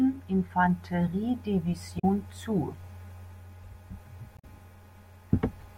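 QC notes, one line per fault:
1.96–2.04 s and 4.36–4.44 s: damaged data in a compressed stream. Corrupted bytes in the encoded speech make the decoder misread frames and lose sync while it hunts for the next valid header, giving two brief glitches of roughly 90 ms each.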